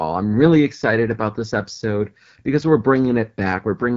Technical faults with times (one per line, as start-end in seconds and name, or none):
0.00-3.96 AMR wideband (HD Voice) codec